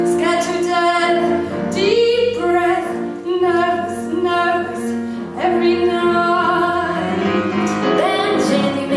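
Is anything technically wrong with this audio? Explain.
No, nothing here points to a technical fault. No working path is listed to comment on, and the audio carries on without any interruption or defect to single out.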